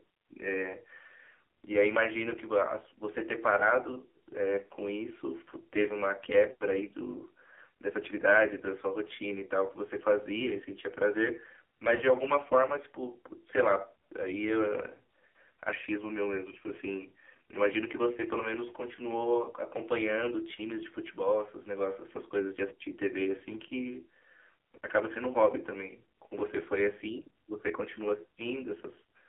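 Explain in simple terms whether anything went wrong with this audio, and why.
Yes, two things went wrong. First, the whole recording has passed through the AMR narrowband mobile codec, the speech system used by older mobile phone networks. It keeps only a narrow band of sound, roughly 300 Hz to 3.4 kHz, and here it was squeezed very hard. Instead of storing the actual sound, it rebuilds the speech from a simplified model, so every part of the clip sounds thin, muffled, buzzy and somewhat artificial.

Second, there are lost AMR speech frames, where small chunks of data were damaged on their way over the radio link. When that happens, the phone guesses by repeating the last good piece of speech at lower volume. At 3.92 to 3.99 seconds this produces a brief dip or wobble, which fits a single lost frame. At 11.96 to 12.02 seconds the gap is longer, which points to two frames in a row, so the sound smears and dips before it recovers.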